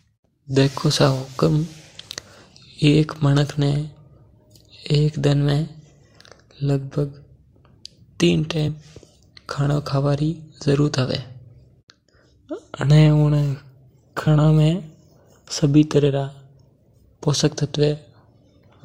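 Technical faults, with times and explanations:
8.67 s and 14.26 s, compressed frames skipped: at each point the speech jumps forward, losing roughly 40 ms at 8.67 s and about 20 ms at 14.26 s, which suggests two whole frames and then one were dropped, either missing from the file or rejected by the decoder as damaged. On a waveform the envelope shifts abruptly with no gap. A spectrogram shows the harmonics breaking discontinuously.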